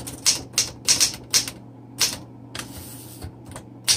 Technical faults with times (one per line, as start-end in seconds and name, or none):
none